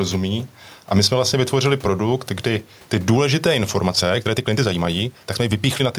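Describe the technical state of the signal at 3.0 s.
At 3.0 s the speech shows gain pumping, present across the whole clip: the room noise, about 37 dB below the speech, swells in pauses and ducks by roughly 5 dB under louder syllables, likely from excessive gain feeding a fast limiter.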